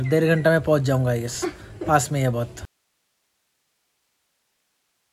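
Audio dropout to a faint residue at 2.65 s, lasting to the end of the clip: the sound cuts out abruptly mid-flow rather than pausing or fading, and what remains is only hiss, roughly 50 dB below the earlier signal level. The likely cause is that the wanted signal was lost while the path after the break stayed live, so the open input keeps passing its own noise floor through in place of the audio.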